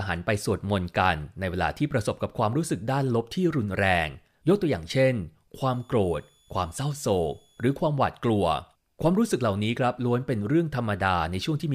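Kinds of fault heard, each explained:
Switching supply whistle: a switching power supply near the audio path ran in an audible burst mode or beat with another one, so its switching energy leaked into the signal as a thin high whistle. Here it sits between 3.40 and 3.47 kHz, wandering slightly within that band, and stays faint, roughly 40 dB below the speech, from 5.73 to 7.73 s.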